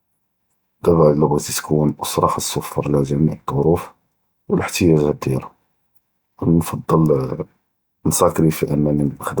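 No technical faults can be heard anywhere in this speech recording. Nothing stands out as a fault at any point, from the first moment to the last.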